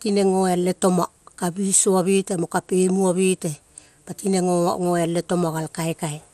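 From start to finish the speech sounds dull and gurgling, with a granular roughness on the voice and no content at all above about 14.4 kHz. The likely cause is MP2 compression at a low rate, which fits a bitrate around 80 kbps: the encoder splits the signal into sub-bands and, short of bits, switches the upper bands off entirely and quantises the remaining ones coarsely, leaving plainly audible codec damage.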